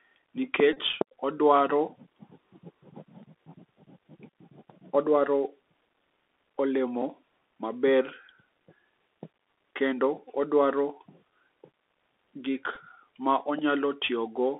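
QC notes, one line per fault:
throughout, Bluetooth CVSD headset codec: 64 kbps one-bit delta coding confines sound to roughly 300 Hz–3.6 kHz, with granular hiss, scratchy s sounds and distortion where loud highs outrun the step.
0.73–0.78 s, 4.30 s, 12.75–12.77 s, Bluetooth headset packet repeated: lost packets are replaced by the previous packet, repeating every 3.75 ms, which gives short buzzes near 267 Hz.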